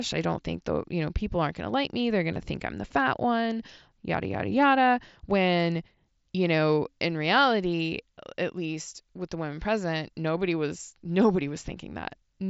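At 2.34 to 2.36 s a brief buzzy, held tone replaces the speech for about 22 ms, with a slight warble as normal audio resumes. This is concealed Bluetooth headset packet loss: a short run of lost packets, which fits about three missing mSBC frames, was filled by repeating the best-matching recent stretch of waveform.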